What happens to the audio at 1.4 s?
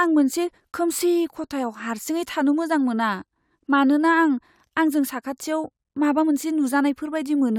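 At 1.4 s the speech carries on cleanly, with no dropout, click, distortion or other fault at that moment.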